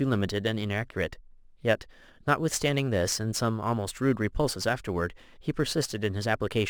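Throughout the speech there is crude rate conversion. Samples were repeated with no filtering, which points to a 44.1 to 48 kHz change. The error sits roughly 25 dB below the speech. It adds a gritty, inharmonic fizz that follows loud and bright sounds.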